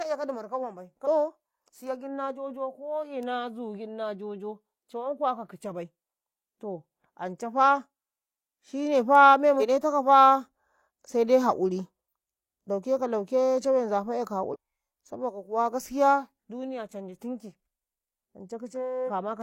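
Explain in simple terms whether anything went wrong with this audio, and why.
Short glitches break into the speech at 1.03–1.07, 9.57–9.62, 14.49–14.56 and 19.04–19.11 seconds. This is damaged data in a compressed stream: parts of the stored file were corrupted, so the player misread those pieces and lost its place for a moment before it picked up again.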